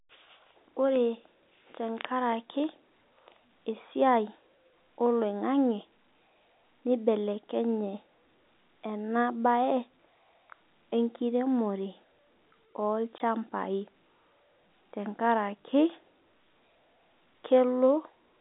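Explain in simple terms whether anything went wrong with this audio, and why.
One short glitch: at about 13.18 s a single packet went missing. That's packet loss filled with silence, a tiny hole in the speech lasting about 20 ms.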